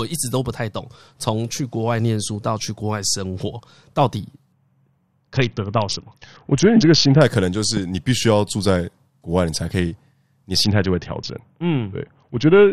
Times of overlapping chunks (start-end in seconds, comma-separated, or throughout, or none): none